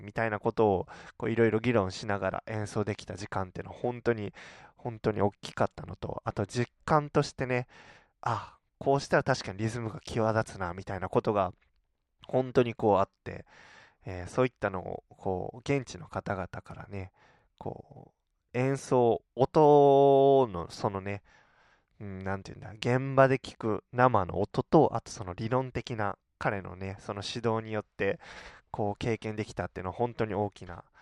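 Nothing in this speech recording stands out as a technical fault at any point, so there's nothing here to flag.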